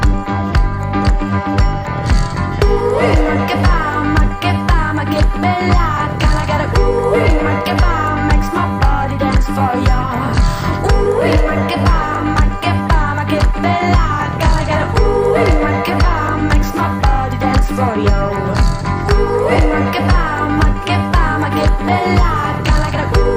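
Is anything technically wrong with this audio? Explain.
Yes. Compressed frames are skipped at 11.05 s, 19.55 s and 22.95 s. Whole 20 ms codec frames never reach the output, so the audio jumps forward: roughly three frames (about 70 ms) at 11.05 and 22.95 s, and about two (40 ms) at 19.55 s. A dropout would leave a silent gap, and a sample-level splice would give a hard click.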